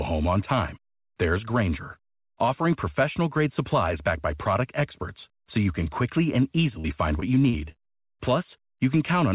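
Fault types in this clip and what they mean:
Repeated packet loss (robotic sound): packets kept arriving lost or late from 6.8 to 7.87 s, just after "you can quickly and", and each hole was patched by carrying the preceding sound forward. Five short dropouts, the longest 41 ms, add up to about 140 ms, roughly 13% of that stretch, so the speech turns choppy, with pieces missing, over the call's 4 kHz telephone-band sound.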